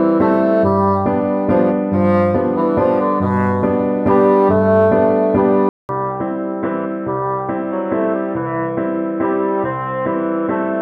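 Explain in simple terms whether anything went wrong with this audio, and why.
At about 5.69 s the sound goes quiet for a moment, about 200 ms, then returns duller, a bit quieter, with nothing above 3.5 kHz and a faint new background. That's most likely an input switched to a poorer device, lasting to the end.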